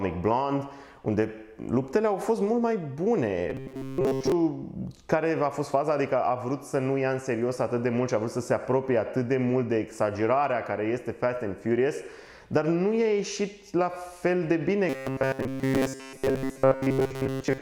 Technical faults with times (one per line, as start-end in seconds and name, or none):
3.50-4.32 robotic sound from repeated short buffers
14.89-17.61 robotic sound from repeated short buffers